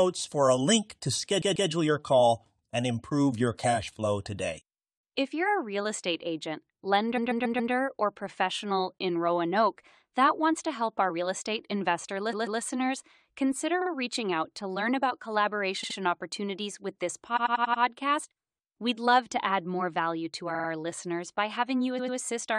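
Repeated frames make the speech stutter at 1.41, 7.16, 12.32, 13.81, 15.83, 17.36, 20.54 and 21.98 s. Each time, a compressed block of 46 to 139 ms was sent again. It plays two to five extra times.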